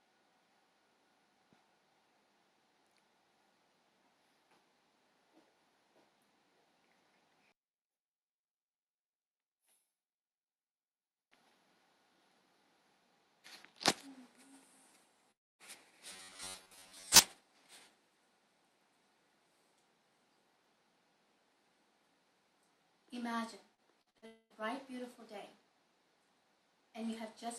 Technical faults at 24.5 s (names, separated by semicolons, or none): long network dropout